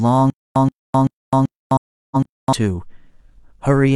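A speech clip with two overlapping problems. From 0.30 to 2.53 s there's a stutter with silent gaps: a 127 ms burst of sound repeats five times, every 385 ms, with about 257 ms of dead digital silence between repeats. That's likely a player or stream stalling and replaying its last fragment on each retry, so the audio meant for that stretch never arrives. Inside it, from 1.76 to 2.26 s, there's AAC frame loss with muting: 384 ms of sound drops out in patches across roughly half a second, the longest hole around a fifth of a second. The decoder zeroed the missing frames, and its overlapping windows fade the sound out and back in around each hole.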